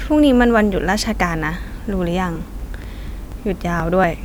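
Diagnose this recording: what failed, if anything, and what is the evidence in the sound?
The failure is periodic USB or driver dropouts at the driver or buffer stage. From 2.36 to 4.04 s the speech carries regular ticks every 0.24 s, around seven in all. Each time roughly 10 ms of audio is skipped outright when a recurring task stalls the audio path.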